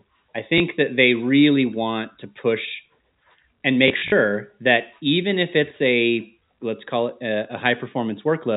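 A small blip sounds at 0.58 s, just before "that they really want". A rougher, buzzy stutter follows from 3.88 to 4.12 s, before "that even if it's". This is packet loss with last packet repeated. A 20 ms block went missing first. Later, about 100 ms was lost in bursts of up to 40 ms. Each gap was filled by replaying the previous block, whose joins seldom match the pitch cycle, and repeated runs buzz near 50 Hz.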